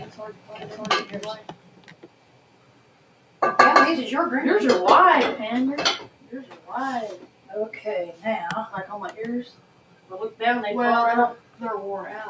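A noise suppressor applied to music or sounds, built for speech, treats sustained material as noise, so the level pumps across the whole clip with swings of around 10 dB. Sound cut by the noise suppressor occurs at 0.05–0.76 s, 1.36–3.41 s, 6.04–6.70 s, 7.16–7.50 s, 9.45–10.11 s and 11.36–11.61 s. Held sound and decays sink by about 10 dB (about 9 dB in the last), while the call's microphone path also leaves nothing above 8 kHz.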